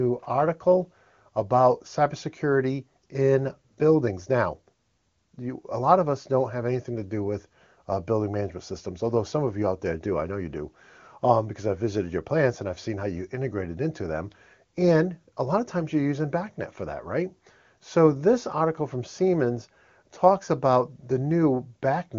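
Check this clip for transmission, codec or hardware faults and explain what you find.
The speech is band-limited to about 7.3 kHz, consistent with the AMR wideband (HD Voice) codec running at a high rate, with any coding damage faint at most and nothing in the signal that amounts to a fault.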